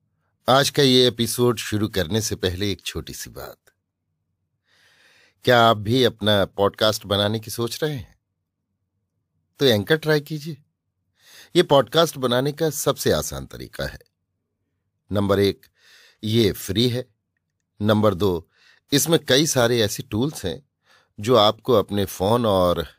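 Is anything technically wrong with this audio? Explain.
No, nothing technically wrong turns up anywhere in this speech recording.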